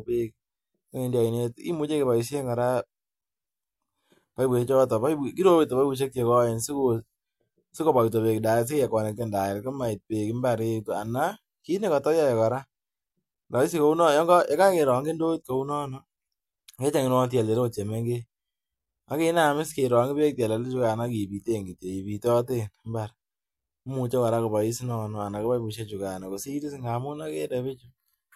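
A speech recording, and nothing is technically wrong with it.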